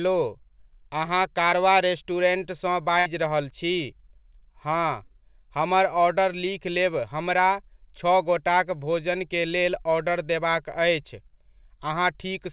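At 1.50 to 1.54 s, just before "रेस्टुरेन्ट सँ", a brief smear passes through the speech. This is short concealed packet loss: about 20 ms of audio arrived too late, and the receiver patched roughly 15 ms of it by extending the preceding sound before rejoining the real signal.

From 3.00 to 3.08 s, between "रेस्टुरेन्ट सँ" and "रहल छी", the speech turns into a held, fading sound and then jumps ahead. This is a burst of packet loss: about 60 ms went missing, and the receiver filled it by continuing the last sound while turning it down. The band-limited sound, with nothing above 4 kHz, points to a G.711 call codec.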